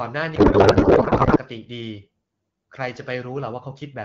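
From 0.35 to 1.39 s there's a codec payload misread: the speech turns into garbled, warbly noise that barely tracks it, which fits octet-aligned AMR frames being unpacked as bandwidth-efficient. Once the packing matches again, the AMR-WB stream at 12.65 kbit/s comes back clear.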